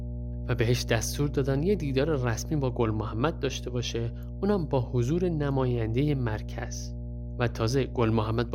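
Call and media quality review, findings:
Mains hum, entire clip: steady 60 Hz tone with low harmonics, roughly 10 dB under the speech. Power line coupling into the capture chain via a ground loop or nearby transformer.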